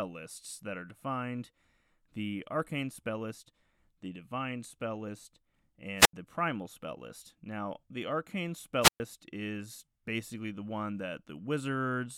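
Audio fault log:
5.96–6.13 s and 8.81–9.00 s, wireless microphone squelch dropout: the speech twice sinks under a short rise of hiss before falling into near silence, about 81 ms the first time and about 122 ms the second, which ends just before "is basically the one". The fading radio signal lets static swell until the receiver's squelch mutes the output. That preceding hiss sets it apart from a digital packet dropout, which cuts out abruptly without any noise build-up.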